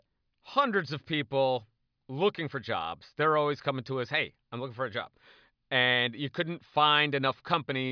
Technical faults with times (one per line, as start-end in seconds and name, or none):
none